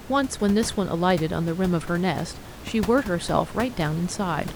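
Speech recording with no technical faults; the room's background noise sits about 14 dB below the speech and belongs to the recording rather than the system.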